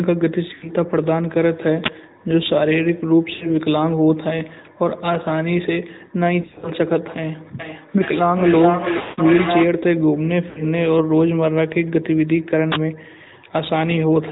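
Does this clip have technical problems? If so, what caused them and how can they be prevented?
Yes. There are four kinds of problem.

The whole clip carries AMR narrowband mobile codec damage. The speech is cut off above 4 kHz, so it sounds muffled and thin. The codec rebuilds the voice from a vocal tract model fed by a few pulses, and here that gives a plainly audible buzzy, synthetic edge. The quality fits a mid-rate AMR-NB mode around 10 kbps. To prevent it, carry the call over a wideband codec such as AMR-WB or EVS.

Lost AMR speech frames break up the speech five times: 0.54 to 0.70 s, 3.34 to 3.49 s, 6.42 to 6.72 s, 8.98 to 9.21 s and 10.50 to 10.61 s. Radio errors corrupted frames, and the decoder bridged each gap by repeating the last good voice settings at falling gain. Short gaps become brief warbles. The 6.42 s stretch is a scatter of short dropouts across 0.2 s. At 8.98 s a run of about 160 ms drags out and fades nearly to silence before the voice returns rough. 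To prevent it, improve radio coverage or use a more robust, lower-rate mode when the link is weak.

An uninitialised buffer causes a harsh burst of digital noise at 1.84 s and again at 12.72 s. Each burst lasts about 40 ms. Playback read a block of memory before any audio had been written into it, so leftover data came out as very loud noise. The length fits a 40 ms audio block. To prevent it, clear every buffer to silence before it can be played.

Feedback howl builds from 7.59 to 9.77 s. Two devices in the same room were joined to the call, so sound looped from loudspeaker to microphone and grew on each pass. The loop settles on a tone near 700 Hz. The loop's delay is about 0.4 s. It peaks about 3 dB below the speech. To prevent it, keep only one device's microphone and speaker active per room.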